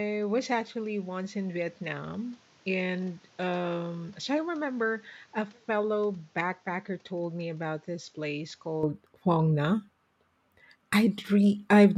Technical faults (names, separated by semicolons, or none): input switched to a poorer device